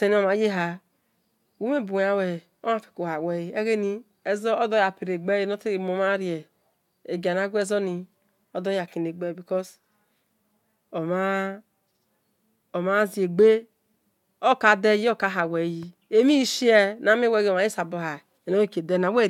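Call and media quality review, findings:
No audible faults in the speech recording; nothing to log against any component.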